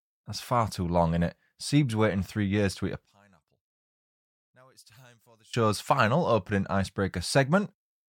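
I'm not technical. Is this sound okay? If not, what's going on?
No. From 3.05 to 5.54 s the speech almost disappears, leaving only a faint trace. That points to one channel inverted, likely: when both sides are combined, they cancel. Unlike a true dropout, the sound never goes completely silent.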